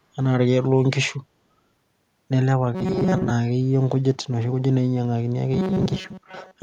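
At 2.75 s the speech suddenly goes robotic until 3.30 s, and it happens again from 5.54 s to the end. Both are the robotic sound from repeated short buffers: the voice becomes a stiff, metallic buzz locked at about 188 Hz that still loosely tracks the words. That pitch points to a roughly 5.3 ms chunk being looped, most likely because fresh audio arrived too slowly and the player kept repeating the last scrap, skipping most of the real signal.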